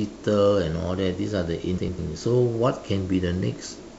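From 1.77 to 1.99 s the speech turns into a garbled flutter. These are frames out of order: two neighbouring 104.5 ms blocks, which fits runs of four frames, were decoded in swapped order, so no time is lost.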